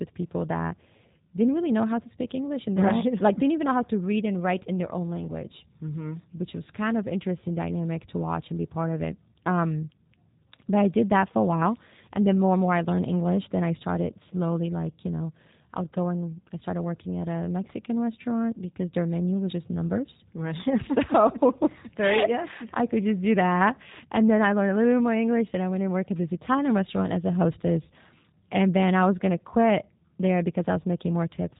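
Throughout the speech, the sound is rough, slightly synthetic and muffled, with nothing above 3.8 kHz. This is plainly audible G.729 codec damage, which fits an 8 kbit/s stream: the speech is rebuilt from a vocal tract model and sparse pulses, not carried as a waveform.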